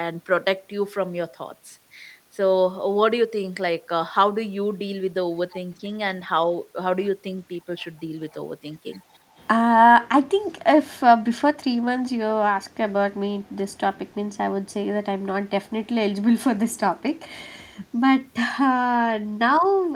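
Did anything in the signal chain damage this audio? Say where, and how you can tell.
Yes. At 10.01 to 10.07 s a brief, faint scrap of the speech comes back a second time, trailing the original by 360 ms and sitting far below it, roughly 25 dB down. That fixed lag and low level point to the call-processing stage: this is likely an echo leak, where a far end on loudspeaker had its echo canceller miss part of what its microphone caught, so a delayed copy was returned down the line.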